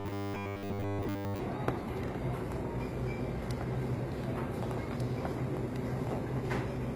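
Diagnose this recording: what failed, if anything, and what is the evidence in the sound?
From 0.01 to 1.39 s the sound turns into a rigid, metallic buzz pitched at 100 Hz. That is robotic sound from repeated short buffers, likely at the driver or buffer stage. A 10 ms chunk keeps repeating while most of the real audio is skipped.

Throughout, the treble is gritty and metallic. This points to HE-AAC compression at the codec stage, likely at a low bitrate near 24 kbps. The treble is rebuilt by copying lower bands upward, so it does not match the original.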